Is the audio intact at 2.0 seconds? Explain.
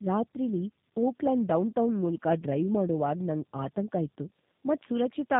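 No. At 2.0 seconds, as throughout the clip, the audio shows tandem speech coding. The signal passed through AMR-NB at 12.2 kbit/s, then G.711 A-law, then G.729A at 8 kbit/s, so two speech codecs in a row each modelled and discarded detail from an already degraded signal. The result is rough, muffled and warbly sound, with nothing above about 3.8 kHz.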